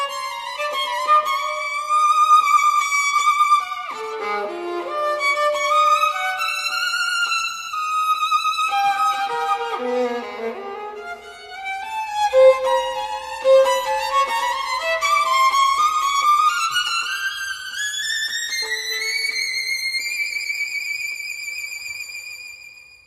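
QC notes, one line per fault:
No audible faults found.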